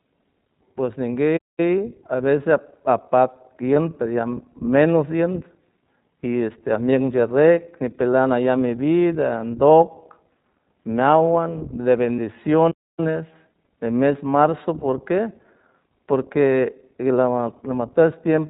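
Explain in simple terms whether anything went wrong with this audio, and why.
Several things went wrong. The speech was squeezed through the iLBC codec, a phone-grade voice codec that discards everything above 4 kHz and rebuilds each 20 ms slice of sound separately. The result is audibly muffled, slightly rough and synthetic-sounding throughout.

There are two playback stalls. The player most likely ran short of data or was held up, so the output simply went silent until it caught up. The speech halts for about a fifth of a second from 1.36 to 1.60 s, just before "a veces", and for just over a quarter second from 12.71 to 13.00 s.

Lost iLBC frames occur at 3.74 s, 12.16 s, and 14.80 s, the last right after "mes marzo". Each time a single 20 ms packet went missing, and the decoder filled the hole by repeating the last bit of voice mixed with noise. This produces a brief buzzy, held blip, and the voice recovers immediately.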